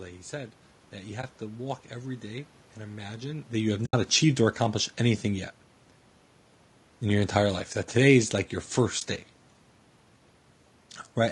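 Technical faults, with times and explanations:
Throughout: low-delay AAC compression. The speech sounds rough and grainy for the whole clip. Noise fills the gaps between the voice's harmonics, and the top band sounds thin and synthetic. This is likely the low-delay AAC used in video calls. Its short frames cannot separate the pitch harmonics cleanly, and at a rate that fits around 32 kbps there are too few bits to keep the voice smooth.
1.21–1.24 s, 3.85–3.94 s, 8.99–9.02 s: AAC frame loss with muting. Three brief holes open in the speech. The first falls after "said that you" and before "to walk every day". The second, the longest at about 80 ms, falls after "imagine that you have" and before "achieved or accomplished anything". The third comes after "today is like your". Each fits lost frames whose content the decoder replaced with silence. The overlapping windows fade the sound out and back in, so each gap is soft-edged.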